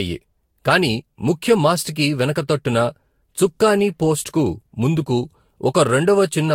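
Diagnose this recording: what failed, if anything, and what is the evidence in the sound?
The damage sits at the codec stage. The speech sounds swirly, hollow and smeared for the whole clip, and consonant attacks blur. Nothing survives above 16.7 kHz. This is likely generation loss: around four lossy passes near 65 kbit/s, each adding fresh quantisation noise.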